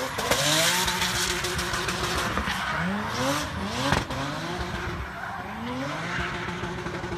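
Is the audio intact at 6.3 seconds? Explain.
Yes, at 6.3 seconds the audio is intact, with no dropout, click, distortion or other fault at that point.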